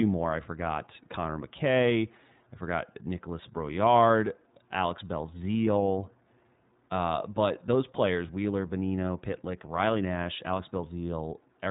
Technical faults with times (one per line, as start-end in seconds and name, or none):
0.00-11.71 iLBC codec